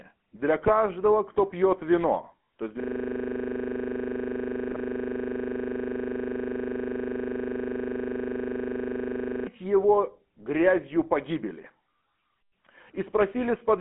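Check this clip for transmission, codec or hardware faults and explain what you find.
Three faults are present in this speech: GSM full-rate coding throughout, two bursts of GSM bit errors, and a long system hang loop.

GSM full-rate codec, throughout: the voice is rebuilt from a vocal-tract model excited by sparse, regularly spaced pulses, consistent with the 13 kbps full-rate scheme. The band runs from 200 Hz to 3.4 kHz, and the coding damage is plainly audible as a buzzy, gravelly roughness.

GSM bit errors at 0.62 to 0.70 s and 4.70 to 4.80 s: corrupted bits reached the decoder and scrambled its filter, pitch or gain values, which fits a few damaged frames each time. Each burst comes through as a brief squawk and gargle.

System hang loop from 2.80 to 9.47 s: the host froze while the audio hardware kept replaying the same 40 ms ring buffer. One slice repeats at 25 Hz for about 6.7 s and produces a rapid, machine-gun-like stutter.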